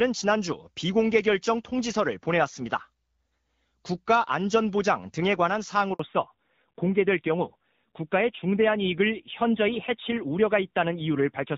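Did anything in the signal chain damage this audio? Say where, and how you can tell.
Yes. At the network stage there is a handover gap from 5.93 to 5.99 s. The speech cuts off abruptly and the line goes completely silent for about 60 ms before sound resumes. This is what happens when the call is passed between networks and no speech frames arrive while the new link is being set up. Whatever was said during that gap is gone, not just muted.

Right after the gap, from 5.99 s to the end, the call falls back to narrowband. Before the switch the audio has HD Voice bandwidth, and its clean, light coding fits AMR-WB at around 12.65 kbit/s. After the switch nothing is left above 4 kHz, and the speech sounds duller and grainier. The codec has dropped to narrowband AMR-NB, and the coarser texture fits a low rate of around 7.4 kbit/s.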